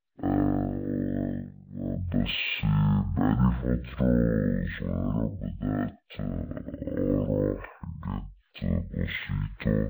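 From start to finish the speech plays at half speed and an octave low, the signature of stereo read as mono: left and right samples are taken one after another as a single channel. A plain rate mismatch wouldn't leave the faint mirrored copy in the upper spectrum.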